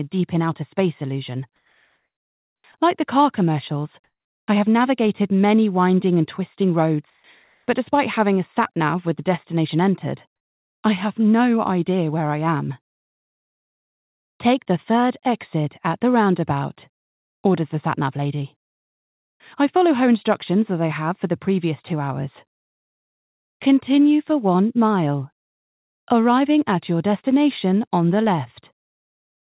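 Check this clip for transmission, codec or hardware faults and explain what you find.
Five pauses have their background replaced by comfort noise: 1.56–2.64 s, 7.10–7.24 s, 7.44–7.68 s, 10.36–10.84 s and 16.94–17.44 s. The natural background gives way to a steady, featureless hiss whose level jumps against its surroundings: about 4 dB and 2 dB quieter in the first two, about 2, 10 and 8 dB louder in the rest. The likely cause is discontinuous transmission, where the receiver synthesises noise in silent gaps, on a narrowband path with nothing above 4 kHz.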